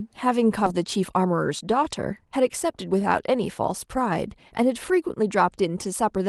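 This speech clip has a skip ahead at about 0.65 to 0.67 s. Roughly 0.7 s of audio was discarded and playback jumps forward with no fill, so the two sides of the jump are butted together. A waveform shows an abrupt splice where the envelope changes without a pause, and a spectrogram shows a vertical seam where the harmonic patterns break off and restart. From 0.77 to 2.92 s a jitter buffer speed-up follows as the receiver drains the backlog. It repeatedly cuts one or a few pitch periods, so the talking runs about 11% fast at unchanged pitch and removes around a fifth of a second in total. On a spectrogram the harmonics keep their spacing while syllables and gaps look compressed in time. The waveform shows pitch cycle trains joined at tiny junctions. The audio passes through a call path whose high-frequency ceiling near 12 kHz fits Opus at roughly 24 kbps.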